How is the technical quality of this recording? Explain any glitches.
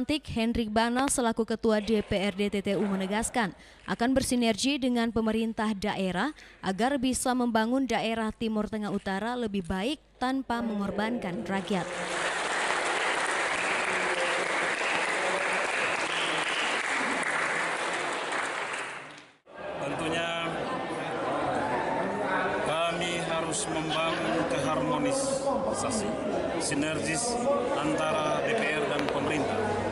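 Six loud pops, in four bursts, interrupt the recording. A double pop occurs at 0.99–1.10 s, single pops at 12.71–12.73 s and 14.95–14.97 s, and another double at 28.99–29.11 s. Each is a sharp transient peaking about 15 to 20 dB above the programme level, while the sound continues underneath. The likely cause is a voltage step or pulse, from a connector, switch, static discharge or driver glitch, added to the signal and shaped by the downstream circuitry into a brief thump.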